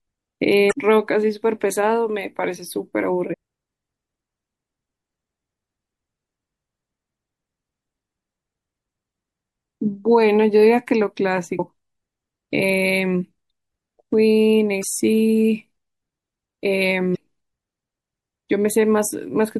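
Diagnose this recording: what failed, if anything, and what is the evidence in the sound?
The whole speech track carries plainly audible MP3 compression damage, so the codec stage is the likely culprit. The quieter detail has that watery, swirly quality you get when weak spectral lines drop in and out between frames. That level of damage fits a starved bitrate somewhere around 64 kbps, where the encoder has to throw away whatever its hearing model ranks lowest.

There's also damaged data in the compressed stream, heard as five short glitches at 0.69–0.73 s, 3.30–3.34 s, 11.56–11.60 s, 14.80–14.84 s and 17.13–17.15 s. Each lasts about 30 to 40 ms. That's the decoder hitting corrupted bytes, misreading or rejecting those frames, losing sync and hunting for the next valid frame header before normal decoding picks up again. That points to storage or transport of the encoded file rather than the encoder itself.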